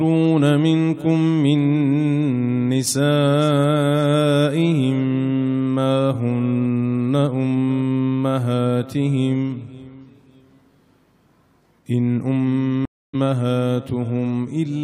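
At 12.85 s a stream reconnect leaves a flat, empty gap of about 0.28 s, then audio resumes roughly a fifth of a second further on, skipping material.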